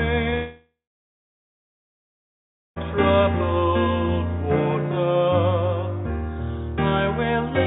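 At 0.30 to 0.34 s, a short concealed packet loss leaves a brief smear. The missing audio is patched from the sound just before it, and the gap lasts only 20 ms, unlike a dropout. From 0.34 to 2.78 s, that patched sound fades into about two seconds of silence, which is likely a long network dropout. Its length, and the audio returning later with a stretch lost, set it apart. Throughout, the narrowband call path passes nothing above 4 kHz.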